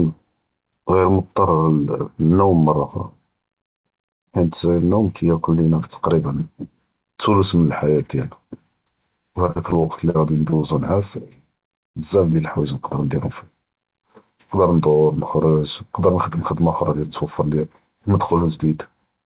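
From 9.46 to 10.64 s, the speech turns choppy from repeated packet loss (robotic sound). Ten short gaps occur, the longest about 42 ms. Each is filled by extending the previous sound, so about 17% of the stretch is patched.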